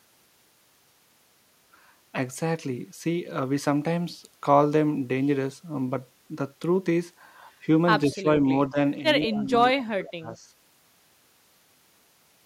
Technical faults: speech suppressed in double talk; one channel drops out

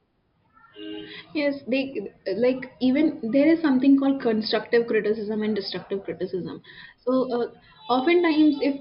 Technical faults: none

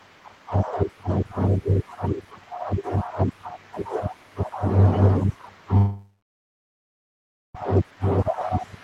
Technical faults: call audio freeze

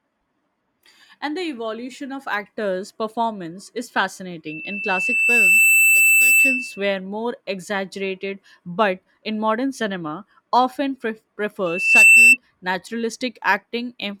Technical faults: loudspeaker feedback squeal

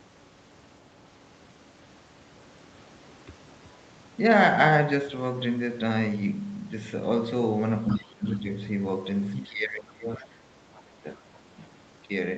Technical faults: other side's voice leaking through; speech suppressed in double talk

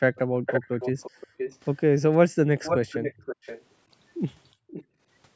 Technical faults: background gated by the echo canceller; echo leak

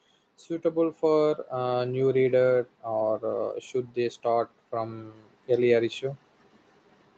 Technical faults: automatic gain rising

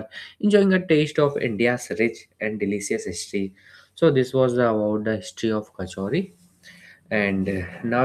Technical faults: none

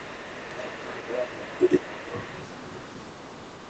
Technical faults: other side's voice leaking through; speech suppressed in double talk

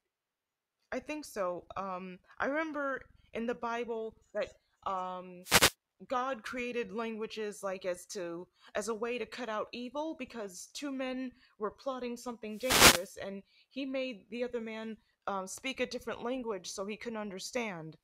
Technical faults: wireless microphone noise hit

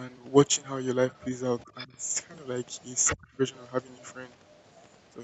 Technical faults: other side's voice leaking through; speech suppressed in double talk

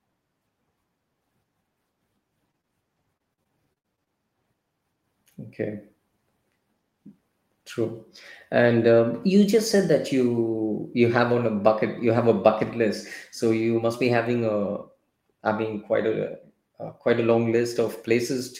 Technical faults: short concealed packet loss; repeated packet loss (robotic sound)

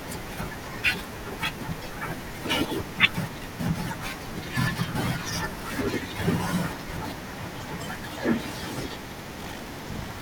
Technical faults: buffer tearing

